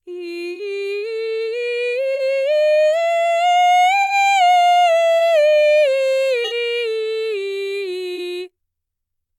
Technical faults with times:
0.54-0.60 corrupt frame concealed
2.14-2.20 corrupt frame concealed
4.02-4.13 corrupt frame concealed
5.19-5.21 corrupt frame concealed
6.44-6.53 corrupt frame concealed
8.16-8.19 corrupt frame concealed

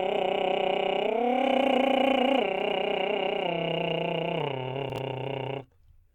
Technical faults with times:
4.90-4.98 chunks out of order

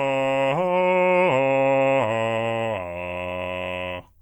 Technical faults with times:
none

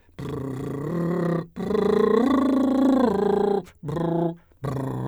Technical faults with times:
none

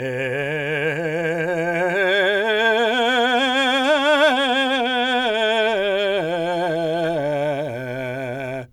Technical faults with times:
none

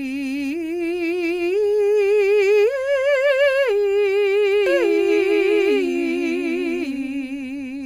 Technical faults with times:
4.66-7.86 doubled audio track

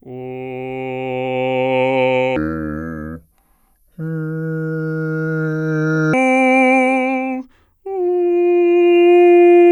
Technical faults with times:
2.36-6.13 section at the wrong speed

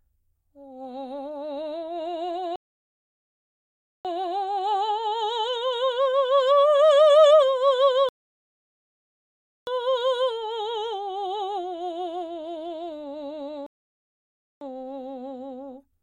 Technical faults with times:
2.56-4.05 rebuffering stall
8.09-9.67 rebuffering stall
13.66-14.61 rebuffering stall

